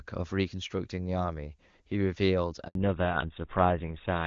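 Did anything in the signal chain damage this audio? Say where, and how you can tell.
Yes. At the network stage, a handover gap runs from 2.67 to 2.75 s: the speech fades out within a few tens of milliseconds and stays silent for 80 ms. A dropout from packet loss would usually be patched by concealment, but here nothing is filled in while the call switches links.

At the codec stage, a fallback to narrowband starts at 2.75 s, right after the gap, and lasts to the end. Nothing above 4 kHz remains, and the speech turns duller and rougher. That points to a switch from HD Voice, heard earlier as clear AMR wideband, to something like GSM full rate. A plain low-pass filter would dull the voice without making it rougher.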